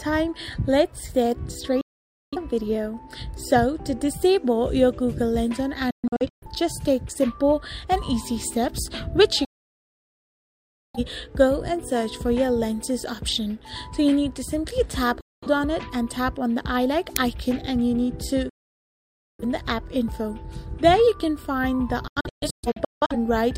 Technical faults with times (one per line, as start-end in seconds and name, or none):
1.81-2.38 digital broadcast dropout
5.91-6.47 digital broadcast dropout
9.45-11.00 digital broadcast dropout
15.21-15.47 digital broadcast dropout
17.16 uninitialised buffer
18.49-19.44 digital broadcast dropout
22.08-23.16 digital broadcast dropout